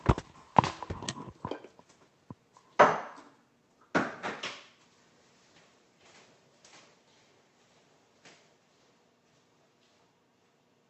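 The clip of sounds has nothing technically wrong with it, having passed through a WebRTC call path with the Opus codec as expected.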